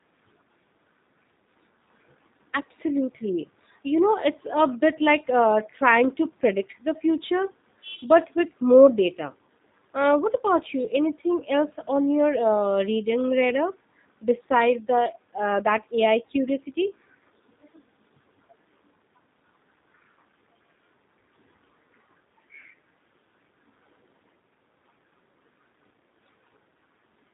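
From start to finish the speech sounds slightly rough and synthetic, with a plainly audible buzzy edge and nothing above 3.8 kHz. This is G.729 codec damage: each short frame is rebuilt from a vocal tract filter, pitch predictor and a few pulses, which fits an 8 kbit/s G.729A stream.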